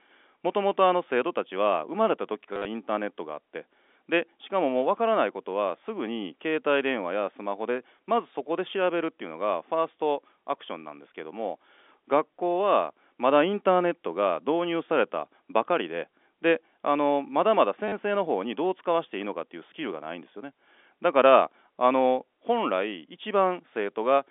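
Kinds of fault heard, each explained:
Packet loss with last packet repeated: the receiver filled gaps by replaying the most recent packet. Around 2.53 to 2.65 s about 100 ms went missing in pieces, the longest gap 50 ms, and at 17.88 s a further 40 ms. The repeats seldom join in step with the pitch, and runs give a brief robotic buzz near 100 Hz, consistent with 10 ms packets, heard over the narrow telephone band.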